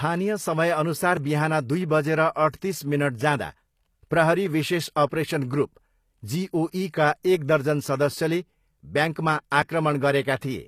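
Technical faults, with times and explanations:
Throughout, HE-AAC compression, likely at a low bitrate: the treble above about 15 kHz is missing, and the sibilants sound gritty and metallic because the upper band is rebuilt from copied lower harmonics.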